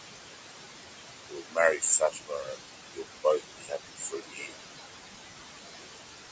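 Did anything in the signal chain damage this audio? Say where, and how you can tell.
Yes. The damage happens at the call-processing stage, in the noise suppressor. The room noise sits only about 7 dB below the speech, and the suppressor pulls it down by about 21 dB between words, letting it rise again under them. This frame-by-frame pumping marks these as noise suppressor artifacts, not a simple gate.

The noise suppressor also cuts speech, at 1.28–1.83 s, 1.99–2.63 s, 2.94–3.05 s and 3.24–4.53 s. There the sound drops by about 21–22 dB along with the background and comes across as swallowed and faint. A network dropout would instead break abruptly to silence.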